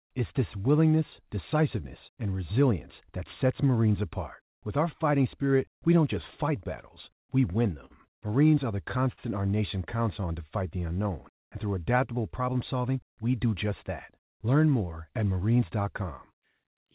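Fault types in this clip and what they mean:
Scattered short gaps: Between 6.6 and 7.93 s, just after "we don't just fight", a handful of packets (around four) went missing and the receiver filled each hole by extending the preceding sound, about 100 ms in total, the longest near 50 ms. The speech picks up brief smears and hiccups. On a spectrogram the harmonic bands freeze or blur for an instant. In the waveform, short runs of repeated cycles appear.
Short stall from a late packet: At 9.13 to 9.20 s, between "are the" and "our nation", one packet arrived late, the jitter buffer emptied, and the last sound was held for 48 ms before resuming. Nothing is lost, but the delay grows by 48 ms and the syllable drags with a slight buzz or dip. A spectrogram shows a flat, stretched patch of unchanging harmonics. The waveform shows a short stretch of near-identical repeated periods.
Jitter buffer speed-up: From 12.40 to 13.46 s, after "unknown and through adaptable" and up to "just that", the buffer was draining excess delay by cutting out pitch-period-sized slices, roughly 100 ms in all. 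Speech runs at about 109% speed with unchanged pitch, so it sounds hurried. On a spectrogram the harmonic spacing stays the same while syllables are compressed in time, all within the G.711 band that stops at 4 kHz. The waveform shows closely spaced splice points.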